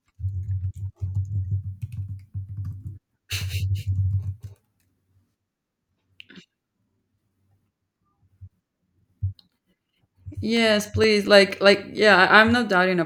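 Speech, with a run of eight short ticks between 10.33 and 11.98 s, each only a few milliseconds: CD scratch ticks, where a disc blemish defeats error correction once per revolution.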